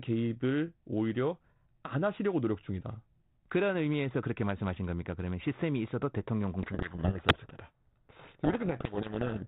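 From 6.62 s to the end at 9.47 s, a codec payload misread: the G.726 code words arrive with their bit order reversed, so the decoder rebuilds wrong differences and harsh distortion buries the speech. Unlike low-bitrate G.726 hiss, this starts abruptly and swamps the sound rather than sitting beneath it.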